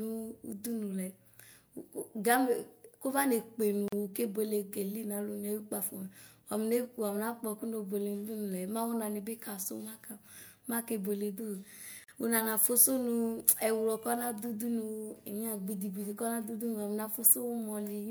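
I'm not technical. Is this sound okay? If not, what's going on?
No. At 3.88 seconds and again at 12.04 seconds the speech briefly drops out, each time for about 40 milliseconds, then picks up exactly where it left off, like a tiny skip. This is a gap at a join of encoded pieces: the audio was compressed in separate chunks and stuck together, and each chunk kept a sliver of silence from the compression at its edges, leaving a short hole at every join.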